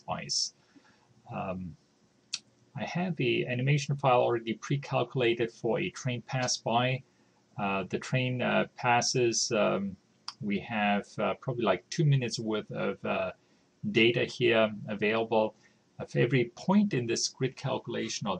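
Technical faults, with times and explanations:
No technical faults detected.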